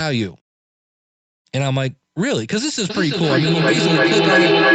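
A speech clip with feedback echo between two devices from 2.9 s to the end. Two devices in the same room share the call. One plays back what the other's microphone sends, and that microphone hears it again. Each echo canceller only removes its own device's output, so the loop stays open. Repeats come round roughly every 300 ms. They build rather than fade, peaking at about 6 dB above the speech.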